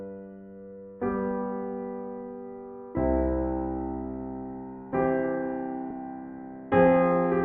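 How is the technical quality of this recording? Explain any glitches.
The music has one glitch, at 5.90 s, where compressed frames are skipped. A short run of encoded frames was either lost from the file or rejected by the decoder as damaged, so it never played. Playback jumps forward by roughly 150 ms, which fits a few frames of about 32 ms each. At the join the music lurches ahead.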